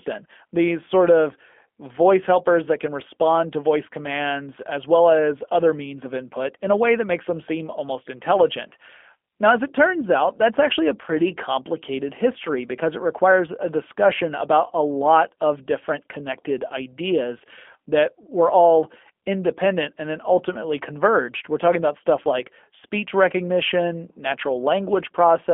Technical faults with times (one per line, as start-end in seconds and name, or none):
0.00-25.53 G.729 codec